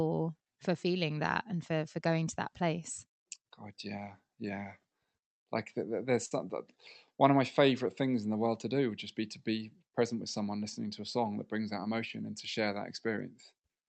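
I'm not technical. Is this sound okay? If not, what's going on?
No. At about 6.25 s, right after "like there's", there is a burst of packet loss lasting until about 6.34 s. A few pieces of the call audio never arrived in time, so for roughly 50 ms the call software kept stretching the last sound it had, letting it fade into a short buzz or hiss. The speech then picks up again, but about 60 ms of it is simply gone, so a small chunk is skipped.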